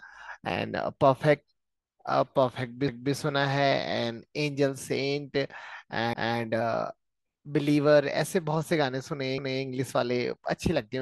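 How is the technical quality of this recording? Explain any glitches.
The recording has a recurring glitch: at 2.88 to 3.14 s, 6.13 to 6.39 s and 9.38 to 9.64 s, a stutter replays the same quarter-second of speech. These are overlapping chunks: the audio was handled in 3-second blocks, each starting 250 ms before the previous ended, so that stretch plays twice at every join.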